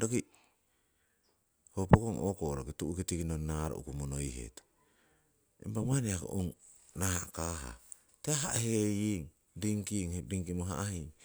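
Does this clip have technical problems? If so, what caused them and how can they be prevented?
No, this clip has no technical problems, so there is nothing to explain or prevent.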